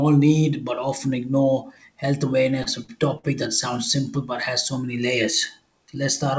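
Speech with three brief held sounds, at 2.63–2.69, 2.84–2.91 and 3.18–3.26 s, each stretched by 31, 42 and 51 ms. These are short stalls from a late packet: the jitter buffer ran dry and the receiver extended the last sound, with nothing lost. The call path's band limit at 8 kHz fits G.722.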